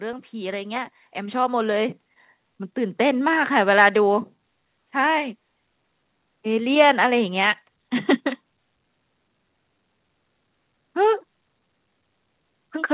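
A speech recording carried over a call, its highs ending at 4 kHz, which fits a narrowband telephone codec. From 0.31 to 2.02 s there is automatic gain rising. The level control judged the input too quiet and lifted its gain by about 8 dB. Voice and background swell up together over those 1.7 seconds.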